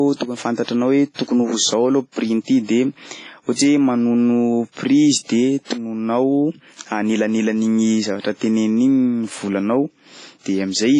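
Throughout the speech, washy ringing and hiss breathing with the signal, with nothing above 10.5 kHz, suggest heavy WMA compression, likely near 24 kbps; a plain low-pass wouldn't smear.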